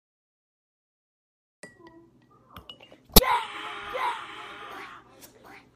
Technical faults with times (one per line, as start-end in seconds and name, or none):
0.00-1.63 cut-off start
3.13-3.19 corrupt frame decoded
3.31-5.76 doubled audio track